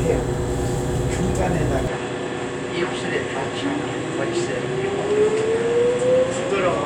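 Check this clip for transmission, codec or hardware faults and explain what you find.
One fault is present. From 1.87 s to the end, the sound turns duller and a little quieter, with nothing above 9.6 kHz and faint new background noise, with no gap at the change. The likely cause is an input switched to a poorer device with a narrower band and its own noise.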